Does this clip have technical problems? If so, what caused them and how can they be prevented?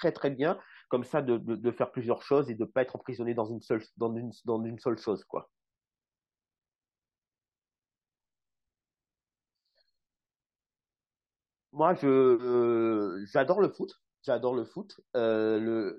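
No, there are no technical faults in this speech recording, so nothing needs preventing.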